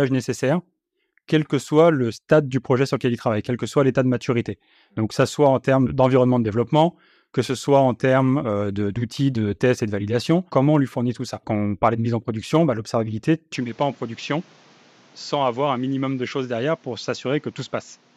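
At 13.56 s, right after "en production bah l'observabilité", the speech abruptly turns duller and a few decibels quieter, with new background noise sitting roughly 30 dB under the voice, and it stays that way to the end. There's no gap at the change. This is likely an input switched to a poorer device. On a spectrogram, energy above 7.6 kHz vanishes at that instant and a faint noise band fills the pauses; the waveform envelope steps down.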